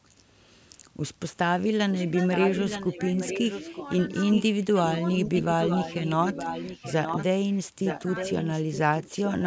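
Echo leak appears first at 0.04 to 0.23 s as a very faint delayed copy of the speech, far below the main talker. From 1.62 s it returns and runs to 9.44 s, now much stronger, only about 10 dB under the direct speech and trailing it by roughly 0.92 s. The delayed layer sounds like a second voice repeating behind the first. This is likely the far end's loudspeaker sound reaching its microphone and slipping past an echo canceller that failed to remove it, so the returned copy is sent back down the line.

Speech suppressed in double talk occurs between 5.28 and 5.45 s, while the echo is still running. The direct speech dips by about 10 dB in short bites totalling around 70 ms, so it briefly sounds pulled back. The canceller, confronted with the talker and the echoed signal at the same moment, likely could not tell them apart and turned the whole signal down rather than only the echo.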